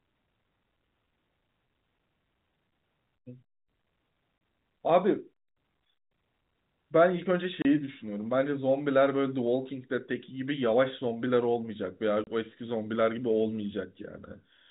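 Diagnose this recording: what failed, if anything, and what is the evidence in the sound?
The network stage failed, with packet loss filled with silence. The speech drops out abruptly three times, at 4.38–4.41 s, 7.62–7.65 s and 12.24–12.27 s. Each gap is 30 ms, which fits one lost 30 ms packet replaced by zeros instead of concealed. Each hole has hard edges. On the waveform these are flat, near-silent notches. On the spectrogram they are blank vertical stripes cutting across the band-limited telephone spectrum that stops near 4 kHz.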